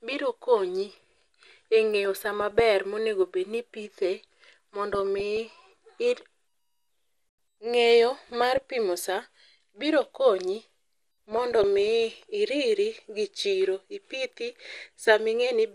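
From the start, the speech sounds dull and plainly gurgling, with granular distortion. This is likely MP2 compression. Upper sub-bands are starved of bits and drop out, and the remaining bands are coarsely quantised, which fits a bitrate around 80 kbps.

DAB burbling then appears four times: 2.41 to 2.60 s, 4.93 to 5.54 s, 8.40 to 8.70 s, and 11.32 to 12.10 s, just before "iriri gi chiro ipithi". Bit errors in a small fraction of a percent slip past error correction. Corrupted samples put short blips of noise into single sub-bands, giving a burbling sound.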